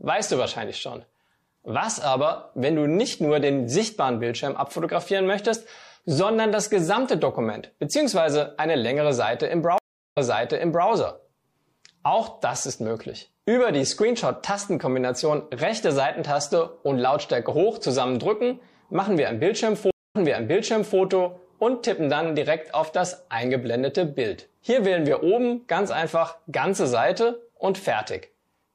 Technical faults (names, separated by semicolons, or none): MP3 compression; stream reconnect